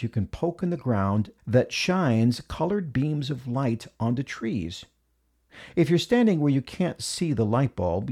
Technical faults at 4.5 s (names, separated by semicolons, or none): none